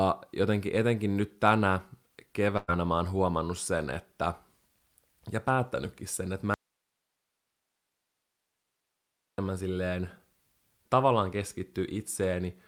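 At 2.57 s the speech hits a burst of packet loss, lasting until 2.70 s. For about 100 ms the real audio never arrived. The receiver filled the hole by stretching the last sound and letting it decay. That gives a brief held, fading tail instead of new speech. Then the talker jumps ahead to "mä oon huomannut sen", with a short stretch of speech simply gone.

At 6.54 s, right after "ja päättänytkin sen että", comes an audio dropout to a faint residue. The speech cuts off abruptly, with no fade. For about 2.8 s, until 9.38 s, only a thin hiss remains, far below the speech level. The hiss shows the path after the break stayed live. The likely cause is the signal being lost upstream while later stages kept running. Speech returns just as suddenly.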